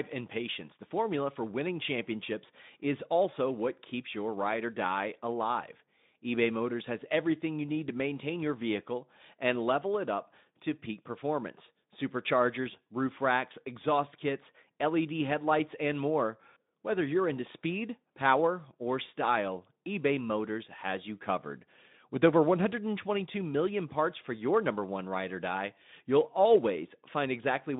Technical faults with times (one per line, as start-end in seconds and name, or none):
none